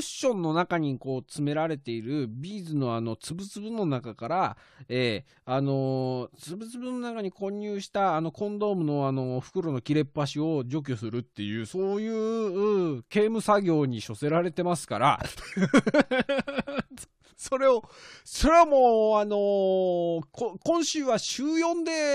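No technical faults are audible anywhere in the speech recording.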